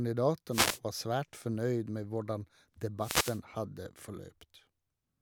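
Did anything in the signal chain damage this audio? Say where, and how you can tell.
Yes. The damage happens in the analogue radio link, before the converter. There are two wireless microphone noise hits. The first runs from 0.50 to 0.80 s, just before "var svært fornøyd med". The second runs from 2.99 to 3.40 s, just after "svært fornøyd med hvordan". Each is a brief swish of static that rises over the speech. Reflected radio paths cancel the FM carrier, so the receiver's own noise swells and masks the voice until the signal recovers.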